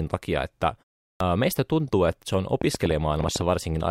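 A short stretch of Finnish speech has two audible faults. The first is a clipped start after a pause. After "takia että" the audio falls silent for about 0.4 s. When sound returns at 1.15 s, the opening of "meistä tuntuu että se" is missing. About 54 ms is swallowed, up to 1.20 s. The output device seems to drop into a sleep state during the gap. It then needs time to wake before it passes sound again, so the first phoneme begins abruptly. The second fault is a train of clicks. It starts just after "tuntuu että se on", at 2.62 s, and runs to 3.42 s. About ten sharp clicks of similar shape arrive at roughly 10 per second. Their spacing is uneven. They peak around 10 dB above the speech and sound like popping laid over it. The likely cause is interference from nearby equipment or a faulty connection or power supply injecting pulses.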